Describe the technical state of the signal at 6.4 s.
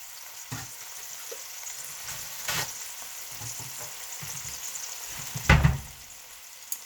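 At 6.4 s the audio is intact, with no dropout, click, distortion or other fault at that point.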